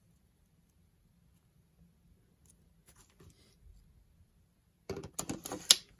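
No audible technical faults anywhere in this recording.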